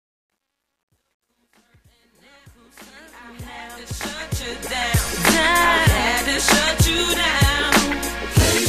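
From 0.0 s to 5.21 s the fade-in shows truncation distortion on a fade. The gain stage drops low-order bits without dither, consistent with roughly 11-bit resolution, so the quietest part of the rising level is rendered as a few coarse steps. The worst stretch, 0.0 s to 3.09 s, sounds gritty. The distortion recedes as the fade climbs, and it ends at 5.21 s.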